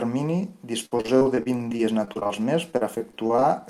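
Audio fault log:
0.85–2.31 s repeated packet loss (robotic sound): gaps up to 57 ms recur rapidly, each filled by extending the preceding sound, concealing a quarter of the stretch and making the speech choppy.
2.71–3.43 s repeated packet loss (robotic sound): a second run of gaps up to 36 ms, again patched by repeating the last sound, covers a quarter of the span and leaves the audio choppy with pieces missing.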